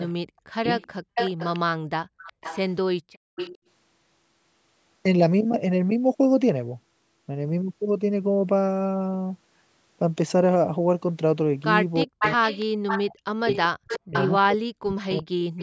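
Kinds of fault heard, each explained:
Echo leak: From 0.0 to 3.58 s and again from 12.19 to 15.62 s, a delayed copy of the speech trails the original by about 379 ms. It sits roughly 10 dB below the speech at first and only about 5 dB below it at the end. The likely cause is a loudspeaker on one side whose echo canceller let part of the microphone pickup through and sent it back.
Speech suppressed in double talk: Between 0.24 and 0.67 s, and across 12.04 to 15.35 s, the talker's speech sinks sharply while the other side is also speaking. At worst it falls by around 40 dB. Altogether it is cut for roughly 0.4 s early on and about two seconds near the end. This likely happens because the echo canceller could not separate the local talker from the returning echo and turned both down together.
Background gated by the echo canceller: From 2.06 to 3.36 s, the room sound beneath the speech drops away briefly, at its deepest by about 36 dB, for roughly 0.4 s in total. 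The canceller clamps the microphone hard while the loudspeaker plays. It then releases, so the ambience vanishes and returns rather than staying steady.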